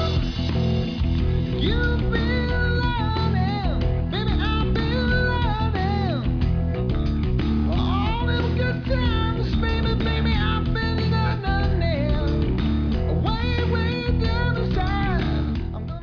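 No technical faults are audible.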